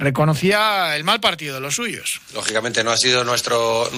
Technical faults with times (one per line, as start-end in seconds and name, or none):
0.51-3.98 pre-emphasis left on